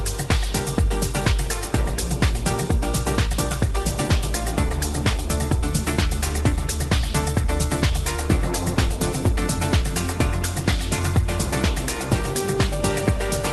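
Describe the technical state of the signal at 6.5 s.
Jitter buffer speed-up, 6.41 to 8.00 s: the overfull receiver buffer trimmed pitch-period slices, about a tenth of a second in all, so the sound runs 5% faster at unchanged pitch.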